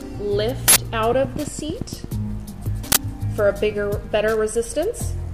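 At 0.68 s there's an uninitialised buffer: an 80 ms block played out before any audio landed in it, so stray memory comes through as a harsh, loud digital burst. From 1.13 to 2.05 s a train of clicks ticks along at a steady 8.8 per second, around ten pops sitting about 10 dB above the sound, likely interference or a faulty connection. The uninitialised buffer fault returns at 2.92 s as a shorter 40 ms burst.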